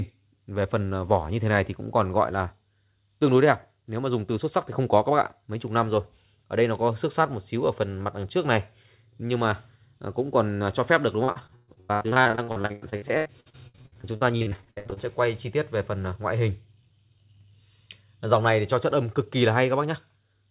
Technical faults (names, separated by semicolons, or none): repeated packet loss (robotic sound)